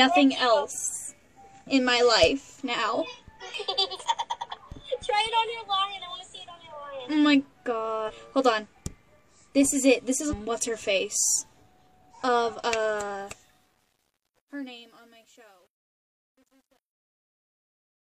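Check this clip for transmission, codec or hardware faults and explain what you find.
Two kinds of fault are present: three bursts of damaged data in a compressed stream, and truncation distortion on the closing fade.

The damaged data in a compressed stream appears at 3.95–4.01 s, 8.04–8.11 s and 10.27–10.33 s. Each event lasts about 50 to 70 ms. Part of the coded data is corrupt at these points. The decoder misreads those frames, loses sync and hunts for the next valid header. The result is a short chirp or squawk.

Truncation distortion on a fade runs from 13.03 s to the end at about 18 s. It is worst from 14.06 s onward. The fade stage keeps too few bits and adds no dither, which fits a path of about 10 bits. As the level drops toward the smallest step, the waveform collapses into coarse square steps. The tail turns gritty.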